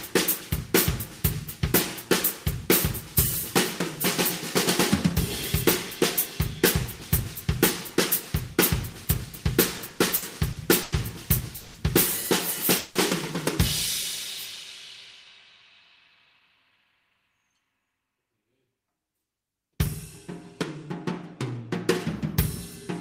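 From 9.77 to 10.94 s, packets kept arriving late or slower than playback consumed them, so the jitter buffer ran dry six times. These repeated stalls (stutter) were bridged by stretching the last sound, about 250 ms of fill in all, the longest gap 100 ms, roughly a fifth of the span. Nothing is lost, but the audio drags and hiccups in short jerks.

Two call audio freezes follow, at 11.56 to 11.76 s and 12.78 to 12.97 s. Packets were likely held up in transit, emptying the buffer. Each time the receiver extended the last sound as a fading buzz or hiss, 180 ms and then 170 ms, with no full silence before resuming exactly where it stopped. Nothing is missing. Each freeze inserts a gap and pushes everything after it later by that amount.

From 16.19 to 18.67 s, the buffer held more audio than its target, as after delayed packets land together. To shrink the delay, the receiver kept cutting out short pieces a pitch period or a few long, removing about 0.3 s in total. 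This jitter buffer speed-up makes the sound run at 111% speed with unchanged pitch, so that stretch comes across as hurried.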